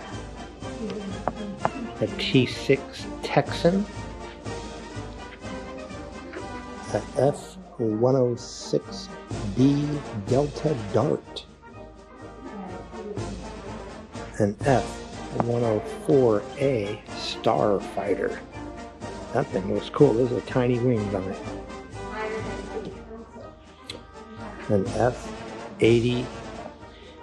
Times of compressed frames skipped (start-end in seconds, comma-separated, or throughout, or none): 2.39-2.46, 14.54-14.61